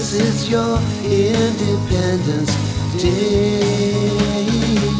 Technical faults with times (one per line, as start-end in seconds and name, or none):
none